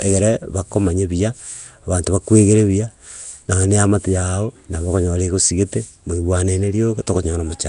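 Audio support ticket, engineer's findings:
Speech, throughout: rough hissy halo, smeared underwater quality, nothing above 10.6 kHz. Likely Nellymoser compression (Nellymoser Asao, Flash mic codec). Plainly audible codec damage, consistent with roughly a 44 kbps stream. Unlike generic MP3-style artefacts, the damage is noise filling starved bands at a fixed two bits per sample over 256-sample blocks.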